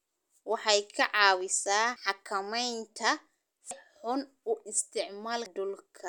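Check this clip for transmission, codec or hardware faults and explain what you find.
The speech jumps forward three times, at 1.96, 3.71 and 5.46 s. Each time, roughly a third of a second of sound is gone. The two sides meet with no gap of silence. This is audio missing between chunks. The likely cause is a recorder working in 2-second chunks that drops a short stretch while closing one chunk and opening the next. The skips recur evenly.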